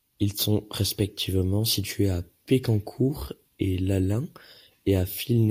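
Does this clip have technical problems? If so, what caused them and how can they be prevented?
No, the speech comes through as a steady, intact signal with no audible technical faults, so there is nothing here that calls for prevention.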